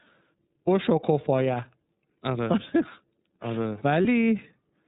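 Throughout the clip the speech carries the sound of the iLBC codec, a narrowband VoIP coder. Everything above 4 kHz is missing, which gives the audio a telephone-band dullness. The coding damage is plainly audible as a rough, slightly synthetic texture on the voice. That texture comes from the excitation being coded frame by frame. The character fits the 13.33 kbps mode with 30 ms frames.

From 4.02 to 4.06 s there is a short episode of lost iLBC frames. About 30 ms of signal did not arrive, which points to a single dropped frame. The decoder fills the hole by repeating the last pitch period blended with noise. It is heard as a brief held, faintly buzzy vowel-like smear. Because each iLBC frame decodes independently, the speech snaps back cleanly right after.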